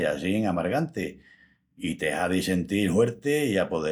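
No technical faults can be heard anywhere in this recording.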